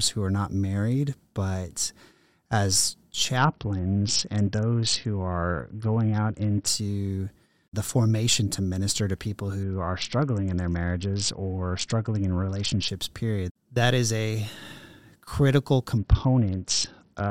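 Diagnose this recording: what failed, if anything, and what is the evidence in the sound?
Three stretches of this speech turn dull and gritty, 3.37 to 6.67 s, 9.63 to 12.88 s (after "to minister to people", recovering at "period that is a") and 15.97 s to the end. It is a Bluetooth SBC bit pool drop at the codec stage: treble dulls and grainy noise rises, pointing to a bit pool cut from 31 to about 7, near 61 kbps.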